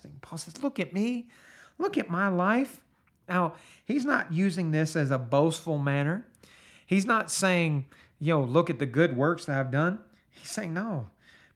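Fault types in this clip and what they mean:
No fault types are present in this clip.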